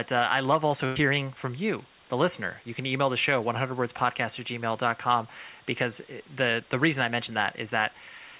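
A burst of packet loss hits this speech recording at 0.86 to 0.98 s. The receiver covered roughly 95 ms by extending and fading the last sound, so a brief buzz or hiss replaces the signal. Speech then resumes with about 100 ms skipped. The recording has nothing above 4 kHz, which points to a narrowband G.711 call path.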